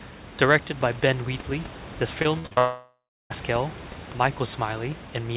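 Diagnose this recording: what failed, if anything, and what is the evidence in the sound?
Network stage, repeated packet loss (robotic sound): from 2.22 to 2.59 s, four short holes up to 58 ms are patched by repeating sound, giving a choppy texture with pieces missing.

From 2.59 to 3.32 s the sound stretches into a fading buzz, then about 0.3 s of silence. The likely cause is a long network dropout, with that audio never delivered.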